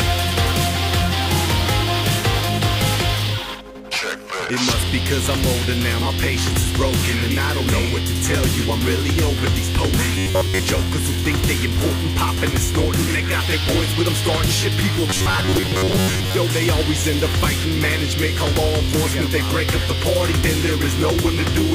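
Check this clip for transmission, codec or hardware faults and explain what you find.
Two short passages carry robotic sound from repeated short buffers, at 10.16 to 10.59 s and 15.10 to 16.35 s. Both times the audio turns into a rigid, metallic buzz at about 93.8 Hz. The likely cause is late-arriving audio being replaced by repeats of a roughly 10.7 ms chunk, which skips most of the real signal.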